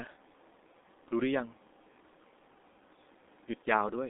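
Speech through the G.723.1 codec throughout sounds muffled and hoarse, with a spectrogram showing energy only from 250 Hz to a hard 3.8 kHz ceiling.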